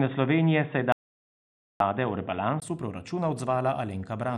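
From the start, the speech is narrow and boxy, with nothing above 3.8 kHz, pointing to an input switched to a poorer device, likely a headset call profile or a lesser microphone. Its added noise sits far below the speech, so the band limit and dull tone mark it, not hiss.

At 0.92 s an audio dropout to silence cuts the sound completely for 0.88 s, until 1.80 s. Unlike the brief gap at a device switch, this is long and holds no room tone at all, which suggests the input was lost while the recorder kept writing silence.

At 2.62 s the speech suddenly clears and widens as the better input returns, after a 20 ms silence and a level jump of about 5 dB. The new tone across the switch separates it from the dropout, where the same dull sound resumes.

MP2 compression runs through the whole clip: the audio is cut off above 13.5 kHz, and a gurgling, granular grain rides on the remaining bands. That texture fits a low rate of around 64 kbps. 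The distortion, not just the missing top, is what sets it apart from the narrower device.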